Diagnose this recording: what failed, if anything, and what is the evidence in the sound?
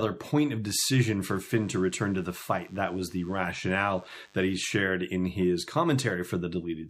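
Radio-frequency interference got into the analogue audio path. A nearby DECT cordless phone or base station was transmitting short bursts every 10 ms, and a junction somewhere in the wiring or input circuit rectified them into the audio. From 1.21 s to 4.76 s the speech carries a DECT cordless phone buzz: a steady, thin 100 Hz tone rich in harmonics, sitting well below the speech.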